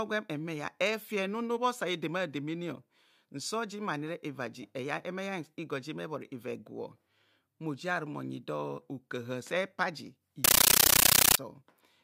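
Speech, interrupted from 10.44 to 11.38 s by a compressed stream played as audio: undecoded AC-3 data becomes loud static in 13.3 ms bursts repeating at 31.25 Hz, regular rather than random noise.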